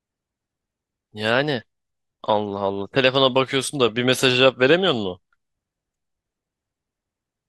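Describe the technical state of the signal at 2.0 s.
At 2.0 s the speech signal is intact, with no audible technical fault at that moment.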